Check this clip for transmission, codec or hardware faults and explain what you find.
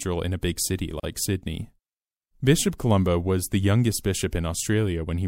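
One fault is present: a gap at a join of encoded pieces. From 1.00 to 1.03 s the speech drops into a 35 ms silence, then resumes where it stopped. The segments were encoded separately and joined untrimmed, so encoder start delay and final-frame padding remain. The waveform shows a flat stretch with smeared edges, and the spectrogram a blank vertical band.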